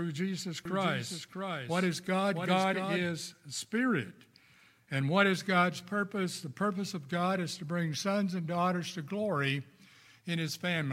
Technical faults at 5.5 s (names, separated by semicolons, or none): none